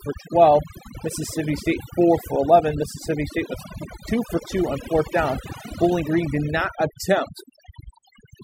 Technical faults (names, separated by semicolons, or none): overdone noise removal